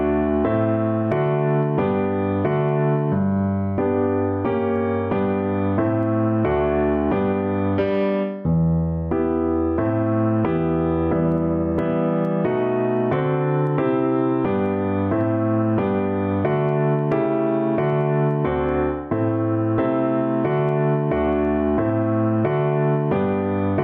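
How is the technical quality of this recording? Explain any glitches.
The recording is compromised by gain pumping throughout. The input gain was likely set far too high, so a fast limiter clamps down on every loud sound. The gain swings by around 10 dB, ducking under each peak, leaving the sound squashed and breathing.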